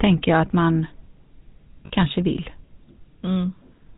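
Across the whole recording the speech carries the plainly audible buzzy, gravelly roughness of the GSM full-rate codec, which fits its 13 kbps mode. The codec models the vocal tract and drives it with regularly spaced pulses, keeping only every third excitation sample. A spectrogram shows a hard ceiling at 4 kHz, with nothing above it.

From 1.86 to 1.90 s, just before "kanske vill", lost GSM frames, about two of them, were replaced by repeating the last good frame's settings. This produces a brief rough, metallic ring. On a spectrogram the bands freeze into flat horizontal streaks, and the waveform shows a repetitive pattern.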